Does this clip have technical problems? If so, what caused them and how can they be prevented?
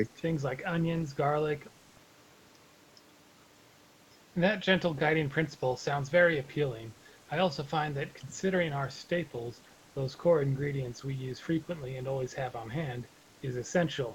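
No, this speech clip has no technical problems. The sound carries nothing above 8 kHz, which is what a call codec's limited bandwidth leaves, and that is normal for a call.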